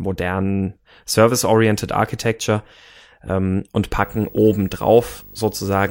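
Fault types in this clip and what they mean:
Video or display buzz: picture-circuit interference coupling into the speech from 4.02 s to the end, a 50 Hz field-rate buzz with hash and a 15.6 kHz line tone, roughly 25 dB down.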